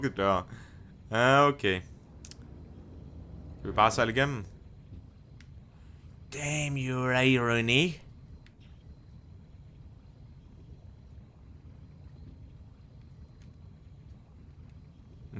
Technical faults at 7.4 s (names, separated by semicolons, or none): none